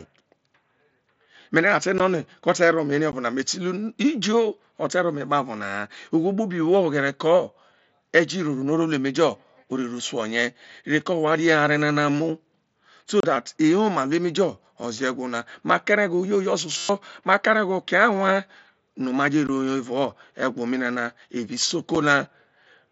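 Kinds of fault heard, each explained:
Unconcealed Bluetooth headset packet loss: Short packets of speech between headset and phone went missing. Nothing filled the gaps, so the sound simply stops. Brief holes with abrupt edges appear at 1.98, 3.12, 19.47 and 21.95 s. Most last about 15 ms, and the last only 7.5 ms. A longer 30 ms hole runs from 13.20 to 13.24 s. The edges can click. The short gaps fit whole 7.5 ms frames being dropped.
System hang loop: The system froze briefly while the sound hardware kept replaying its ring buffer. From 16.78 to 16.89 s, one 11.6 ms slice of speech repeats exactly, about ten times. That loop length fits a 512-sample buffer. At this size the repeat is heard as a steady buzz at 86 Hz, not a stutter. Roughly 100 ms of the real speech is lost beneath it.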